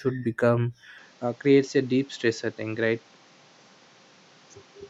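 From 0.98 s to the end, the speech turns duller and about 5 dB quieter with nothing above 7.6 kHz and a new noise floor, likely the input switched to a poorer device.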